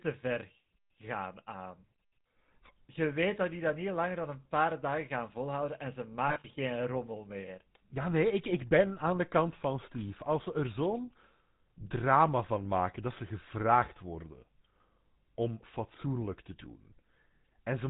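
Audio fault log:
throughout: GSM full-rate codec. The speech has a buzzy, gravelly roughness and nothing above 4 kHz, so sibilants sound dull and clipped. The coder models the vocal tract and excites it with a coarse, regularly spaced pulse train that keeps only every third excitation sample, which produces the grain. The damage is plainly audible and fits the 13 kbps full-rate coder. Unlike a plain band-limited telephone line, the roughness rides on the voice itself rather than leaving a clean but muffled sound.
6.28–6.46 s: lost GSM frames, between "gaan volhouden en ze" and "geen rommel meer". The speech briefly freezes into a rough, metallic ring. Each bad frame is replaced by the last good frame's settings. About 100 ms of sound is missing, scattered over 160 ms in short runs of roughly 40 ms at most, which points to about five frames. None of the gaps lasts long enough to fade to silence. 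Unlike a clean dropout or a click, the missing stretch is filled with a smear of the preceding sound rather than a gap.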